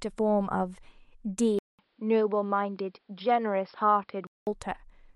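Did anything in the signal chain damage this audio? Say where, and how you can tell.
Yes. An input switched to a poorer device, from 1.59 s to 4.47 s, at the driver and device-selection stage. The speech goes abruptly dull and boxy, with nothing above 5.4 kHz, after a 200 ms silence at the changeover. A faint new background noise, roughly 45 dB below the speech, comes in, while the overall level stays about the same. The likely cause is the system rerouting capture to a narrower-band microphone or headset profile, then switching back at 4.47 s.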